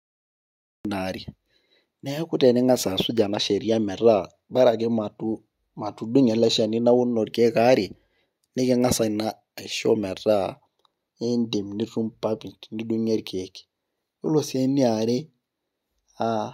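The clip opens with digital silence that runs from 0 to 0.85 s. At 0.85 s the speech appears abruptly, already partway through a sound. This is a cut-off start. The capture or stream began late, so the start of that sound was never recorded. The audio jumps straight from nothing to full level. There is no natural attack and no fade-in. The first syllable sounds chopped off at its front edge.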